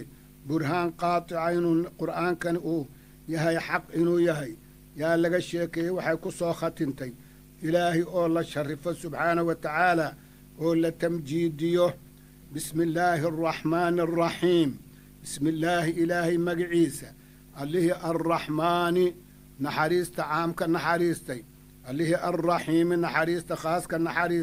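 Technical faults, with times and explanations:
No technical faults can be heard in this audio. Nothing in it calls for a time or an explanation.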